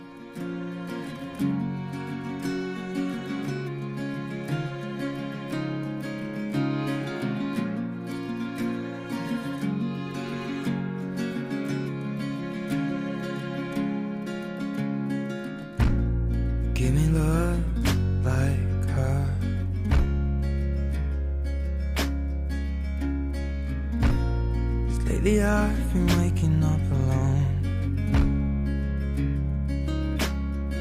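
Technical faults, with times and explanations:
No technical faults can be heard at any point in the recording.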